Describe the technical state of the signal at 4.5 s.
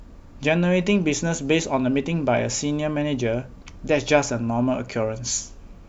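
At 4.5 s the speech signal is intact, with no dropout, clipping, glitch or other technical fault to be heard at that moment.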